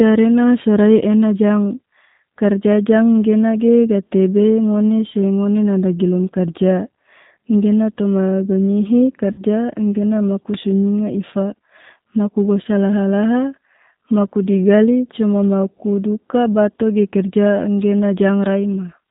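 Throughout the speech, the G.729 codec rebuilds the signal from a vocal tract filter, a pitch predictor and a few pulses per frame, which fits an 8 kbit/s stream. Nothing above 4 kHz survives, and the voice sounds plainly rough, thin and synthetic.

From 9.32 to 9.42 s, VoIP packet loss concealed by the speech codec: about 60 ms of audio went missing, which fits two lost packets. The decoder stretched its last pitch and filter into a fading buzzy tone or coloured noise, and the voice stays weak briefly afterward.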